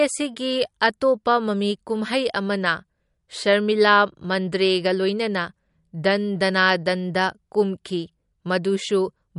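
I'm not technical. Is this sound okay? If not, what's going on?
No. Throughout the speech, the treble stops at about 11.2 kHz and the sound has a watery, swirling quality with metallic chirps on s sounds. This is likely MP3 compression, where the encoder ran short of data, cut the highest frequencies and dropped quieter detail.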